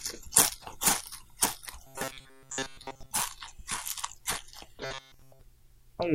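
Robotic sound from repeated short buffers runs from 1.87 to 3.12 s and again from 4.85 to 5.42 s. It is likely caused by new audio arriving too seldom, so a chunk of about 7.5 ms is replayed in place of most of the first stretch and all of the second. That imposes a rigid metallic buzz at 134 Hz.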